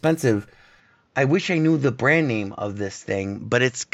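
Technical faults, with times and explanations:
0.8 to 3.94 s, input switched to a poorer device: from 0.8 s the speech abruptly turns duller and a few decibels quieter, with nothing above 7.6 kHz, no gap at the change, and a faint new noise floor well below the speech. This likely reflects the system moving to a narrower-band microphone.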